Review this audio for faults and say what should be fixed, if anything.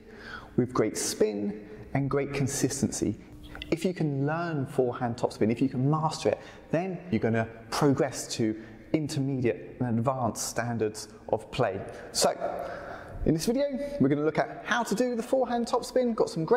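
Nothing here needs fixing; there's no fault to report in this one.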